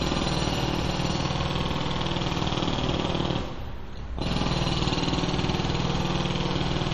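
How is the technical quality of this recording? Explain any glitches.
The technical quality is compromised by heavy lossy coding across the whole recording. From start to finish there is a watery, swirling character with smeared attacks and nothing at all above 13.5 kHz, damage that points to likely MP3 compression at a low bitrate, roughly 48 kbps. Short of bits, the encoder drops weak frequency lines frame by frame and cuts the treble. On a spectrogram this shows as a flat ceiling at 13.5 kHz with flickering, patchy holes below it.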